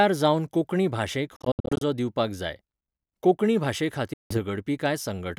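From 1.36 to 1.82 s the speech breaks up into abrupt silent holes, the longest 70 ms, and it does it again at 4.13 to 4.38 s. This is likely a Bluetooth dropout, where late packets are discarded and the sound picks up later as though it had kept playing.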